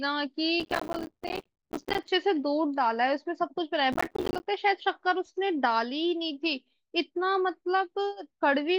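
Processor overload crackle runs from 0.6 to 2.08 s and again from 3.93 to 4.46 s. In both stretches the processor falls behind and misses a long run of buffer deadlines. The short, rapid dropouts point to buffers of roughly 5 ms. Each missed buffer leaves a brief hole of silence with abrupt edges, and many of these in quick succession produce a gritty, tearing crackle over the speech that clears once the load eases.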